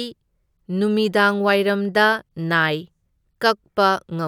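No technical faults can be heard anywhere in this speech recording. Nothing in the sound points to a problem in how it was captured, processed or played back.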